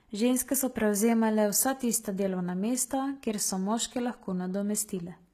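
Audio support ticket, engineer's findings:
Treble gritty and lispy on s sounds throughout, codec damage plainly audible. Likely HE-AAC compression (v2). Upper band rebuilt by spectral band replication: lower bands copied upward and shaped coarsely, so treble harmonics misalign with the fundamentals below the crossover. Consistent with a very low bitrate, around 20 kbps. Spectrogram: upper band looks like smeared, repeated copies of the lower band rather than true harmonics; hard ceiling with nothing above 14.9 kHz.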